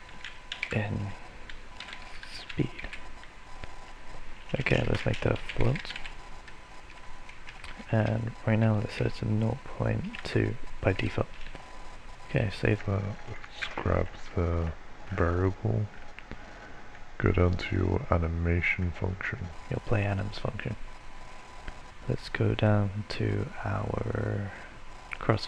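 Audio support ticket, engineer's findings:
Section at the wrong speed, 12.78 s to 19.52 s. Plays at 0.833x: tempo slows and pitch drops about three semitones together, then returns to normal at 19.52 s. Likely a clock or sample-rate mismatch in the editing or playback stage for that span. Unlike a pure pitch shift, duration stretches too. Unlike wow or flutter, the offset stays constant throughout rather than wavering.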